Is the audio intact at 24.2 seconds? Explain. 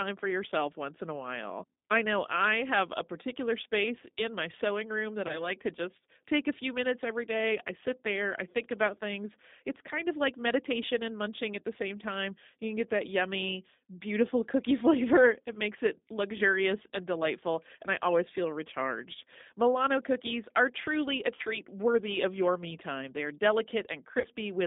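No. From 24.20 to 24.27 s, VoIP packet loss concealed by the speech codec replaces 40 ms of missing audio, which fits two lost packets. The decoder extrapolates its last pitch and filter with falling gain, giving a brief, fading buzzy tone or coloured noise. The G.729 codec also runs throughout at 8 kbit/s, confining the band to 200 Hz to 3.7 kHz and leaving speech plainly rough and synthetic.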